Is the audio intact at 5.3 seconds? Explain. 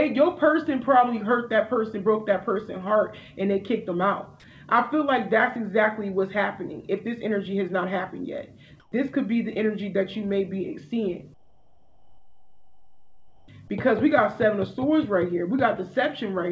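Yes, the audio is intact at 5.3 seconds, with no dropout, glitch or other fault at that moment, only the steady band limit of a call codec, which fits G.722 and leaves nothing above 8 kHz.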